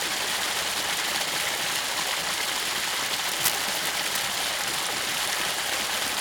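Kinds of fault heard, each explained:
Cable scratch noise: from about 3.27 to 4.40 s there's a rough, uneven scratching and rustling laid over the sound, nearly as loud as the sound itself, likely from a worn cable or connector being moved so its contact kept crackling.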